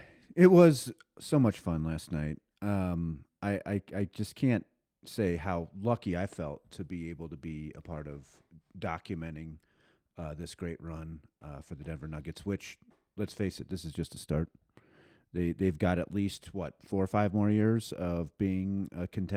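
A speech recording with one lost packet rebuilt from error correction at 16.35 s: a 20 ms frame decoded from its low-bitrate redundant copy, sounding briefly rougher and noisier without any gap.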